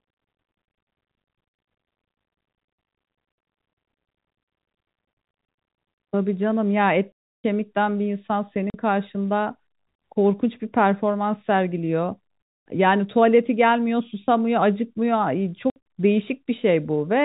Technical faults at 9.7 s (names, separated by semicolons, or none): none